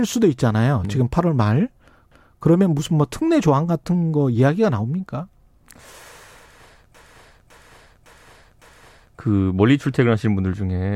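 At 2.12 s the speech stutters: a block of about 0.28 s plays once more, ending at 2.39 s. These are repeated frames, where a run of compressed frames was written twice and the decoder simply played it again. From 6.95 s to 9.17 s the same fault is heavier. A block of about 0.56 s loops four extra times. Together the two repeats lengthen the audio by roughly 2.5 s.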